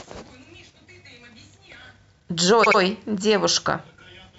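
At 2.63 s to 2.78 s, repeated frames: a 78 ms block of speech replays twice, stuttering and lengthening the audio by 157 ms.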